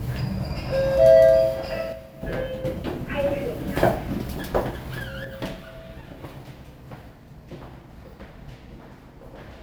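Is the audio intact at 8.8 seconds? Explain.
No. From 5.24 s to the end, one channel drops out, likely from a lost stereo side: the mono sum falls abruptly by about 6 dB.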